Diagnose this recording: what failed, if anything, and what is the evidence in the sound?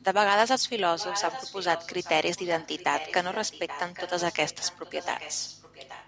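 Echo leak at the call-processing stage. From 0.98 to 2.11 s and from 2.36 s, speech repeats 825 ms late and quieter, likely from an incomplete echo canceller.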